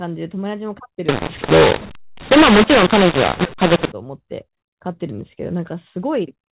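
Telephone-band speech, G.711 telephone coding with nothing above 4 kHz, and from 1.09 to 3.92 s it turns harsh and gritty, levels jumping about and the pauses filling with hiss. That's mu-law and A-law mixed up: audio encoded as mu-law being decoded as A-law.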